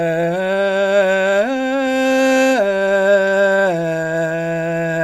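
A music clip with repeated stalls (stutter) between 3.49 and 4.40 s: nine brief hitches, the longest 24 ms, where late packets drained the jitter buffer and the receiver extended the last sound. A spectrogram shows short frozen, smeared columns; the waveform shows repeated cycles.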